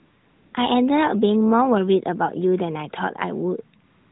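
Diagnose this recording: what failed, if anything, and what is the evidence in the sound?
AMR comfort noise, codec stage: from 0 to 0.54 s and 3.84 to 4.11 s, speech frames stop and the receiver synthesises smooth, steady noise in place of the real background.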